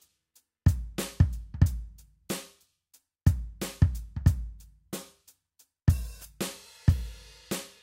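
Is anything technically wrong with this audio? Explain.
Yes, there's sample clock jitter running through the whole piece of music. The converter's clock wobbles by around a microsecond and a half, so samples land slightly off-time, worst on steep waveform slopes. You hear a faint hiss or grit roughly 40 dB down that swells with loud, bright passages.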